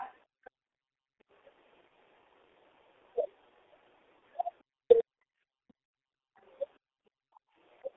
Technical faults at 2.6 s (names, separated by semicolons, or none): G.723.1 codec